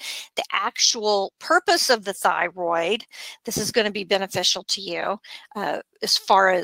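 No technical faults can be heard anywhere in this audio.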